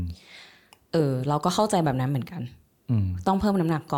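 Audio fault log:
Nothing to log here: no faults turn up anywhere in this speech clip.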